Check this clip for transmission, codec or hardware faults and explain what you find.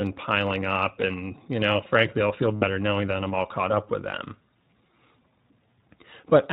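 There are two related faults here, both from the iLBC codec carrying the speech.

Throughout, the iLBC codec band-limits everything to below 4 kHz and leaves the speech plainly rough and a bit synthetic, which fits its 15.2 kbps, 20 ms mode.

From 2.56 to 2.65 s, between "know frankly I'll feel" and "knowing that I'm all", there are lost iLBC frames. The decoder repeats the last pitch cycle with added noise, giving a brief buzzy held vowel across three frames, 60 ms in all. The speech recovers right away.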